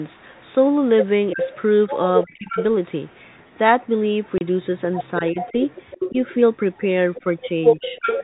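Echo leak, from 1.31 to 2.64 s, is a delayed copy of the speech arriving 344 ms late at about 5 dB below the direct sound. It is likely the far end's loudspeaker feeding its microphone past an echo canceller that failed to remove it.

Speech suppressed in double talk overlaps it, from 1.34 to 2.59 s. While both sides sound at once, the speech on the loudspeaker side dips in short stretches totalling around 0.4 s, at worst by roughly 25 dB, likely as the canceller turns down everything it cannot separate from echo.

Packet loss filled with silence hits at 4.38 s: a 30 ms hole, the length of one packet, replaced by digital silence, so the speech drops out abruptly with hard edges.

Double-talk suppression returns from 5.21 to 6.15 s, shallower at around 10 dB and only about 0.2 s in total. The echo leak reappears at 5.38 s and runs to the end, again 344 ms behind and about 5 dB down. Within it, a brief suppression of roughly 10 dB falls between 7.24 and 7.83 s.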